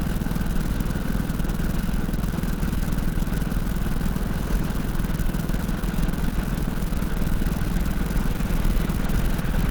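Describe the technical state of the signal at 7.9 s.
Opus compression is the likely cause of the damage heard at 7.9 s. It runs through the whole clip rather than appearing as a single event. The audio has a plainly audible coarse, hoarse and grainy texture. The top of the spectrum still reaches about 20.1 kHz, so the bandwidth has not narrowed. The roughness fits an encoder starved of bits, around 16 kbps, working in its hybrid mode. That mode codes the lower band with a speech-oriented model and fills the upper bands approximately, trading clean detail for noise-like texture.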